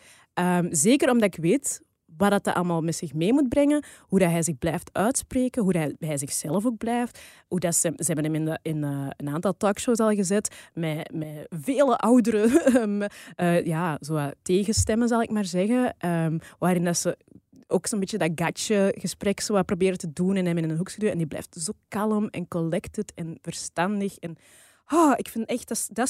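Nothing technically wrong can be heard in this speech recording: there is no audible disruption to the audio path at any point.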